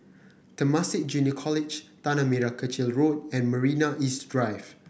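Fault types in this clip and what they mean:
No faults detected; the speech signal shows nothing to flag.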